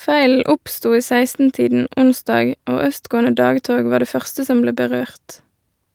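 No technical faults can be heard anywhere in the recording, and the signal stays steady and intact throughout.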